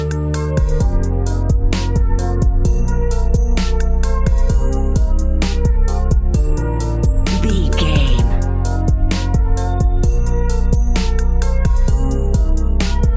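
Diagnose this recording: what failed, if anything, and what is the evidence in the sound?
Nothing failed in this recording.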